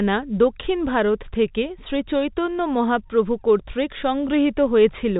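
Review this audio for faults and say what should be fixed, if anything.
Nothing here needs fixing; the speech comes through over ordinary telephone-style coding with no faults to chase down.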